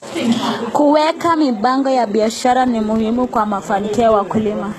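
From the start the speech carries heavy HE-AAC compression damage, likely from a low-rate encode around 16 kbps. Nothing sounds above about 12.3 kHz, and the treble is rebuilt from copied lower bands, so sibilants turn gritty and metallic rather than crisp.

At 2.24 s, right after "mipango ya", a filter restarted on every block begins. Each block starts from a cleared state and opens with a small transient, producing a 25 Hz buzz, which fits 40 ms blocks. The buzz tracks the speech level until the end.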